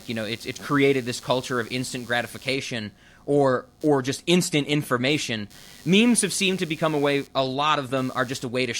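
Throughout the speech, computer activity noise buzzes roughly a hundred times per second, about 30 dB down. Unlike steady mains hum, it shifts with computer load.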